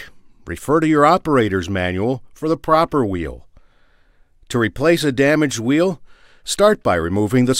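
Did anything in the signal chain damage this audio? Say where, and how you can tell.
No, nothing damaged this audio.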